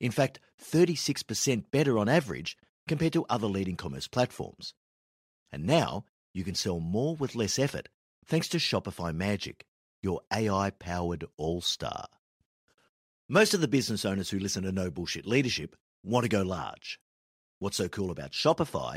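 Listening closely to the speech, nothing stood out as a technical fault at any point.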